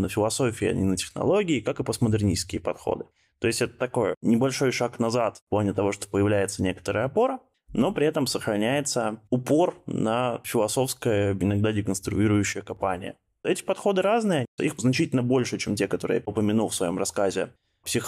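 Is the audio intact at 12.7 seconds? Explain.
No. At 12.7 seconds the clip is inside a sudden gain jump that runs from about 12.53 to 12.77 s. The level drops by about 6 dB in a single step and stays there for roughly a quarter of a second. The most likely cause is a digital gain setting or bit shift applied instantly rather than ramped. Because the change acts on the whole signal, the speech and the background noise fall together.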